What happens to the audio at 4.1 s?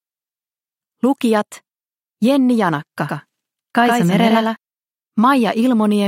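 At 4.1 s the audio is affected by a doubled audio track, running from 3.08 s to 4.56 s. A second full-band copy of the same material sits about a tenth of a second behind the original and a few decibels quieter. It is most likely a second capture through a slower path. The copy carries no decay or room colour, so it reads as a flat, hard-edged echo that cuts in and out abruptly at both ends.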